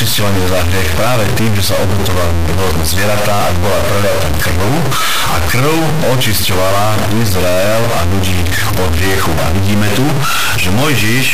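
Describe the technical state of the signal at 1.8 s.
At 1.8 s the speech carries a harsh, buzzy distortion. It is not confined to that moment; it runs through the whole clip. The likely cause is a stuck bit. One data bit seems held at a fixed state, so about half the sample values are off by that bit's weight. The step is large, near -10 dBFS, which points to a high-order bit. The errors track the waveform, and pauses fill with loud noise.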